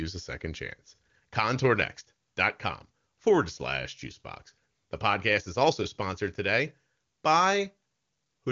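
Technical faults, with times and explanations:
No faults detected; the speech runs through an AMR wideband (HD Voice) path with the band ending near 7.4 kHz, which fits its top 23.85 kbit/s mode.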